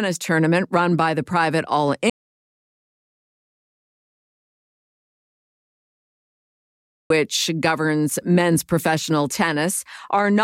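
In this speech recording, an audio dropout to silence cuts the sound to dead, roomless silence from 2.10 to 7.10 s, losing about 5 seconds, likely from a lost input while recording continued.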